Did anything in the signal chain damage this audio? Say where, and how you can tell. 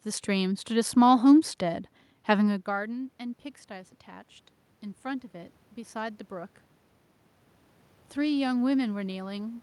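Yes. Call processing: automatic gain rising from 2.64 to 4.36 s and again from 5.03 to 6.6 s. After the talker moves away near 2.5 s, the input falls about 17 dB, and the AGC ramps its gain up about 3 dB, lifting voice and room noise together.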